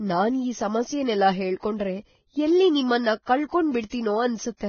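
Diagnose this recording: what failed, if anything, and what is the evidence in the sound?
Codec stage: the speech is hissy and grainy throughout, with nothing above 6.5 kHz. This is likely Vorbis compression at a low bitrate, fitting about 17 kbps. A spectrogram shows a hard ceiling and speckled treble.

Pre-echo, also from the codec: from 3.89 to 3.92 s, a 26 ms hiss precedes a sharp attack as block-wide quantisation noise spills ahead. The waveform shows fuzzy noise before the onset.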